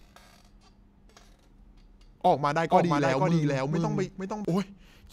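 From 2.71 to 4.45 s, an equally loud dry copy trails about half a second behind: a doubled audio track, likely the sound captured twice.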